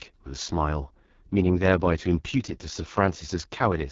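Right through the speech you get that AMR wideband (HD Voice) codec sound at a low rate, which fits the 6.6 kbit/s mode: rough, raspy, with nothing above 7.4 kHz.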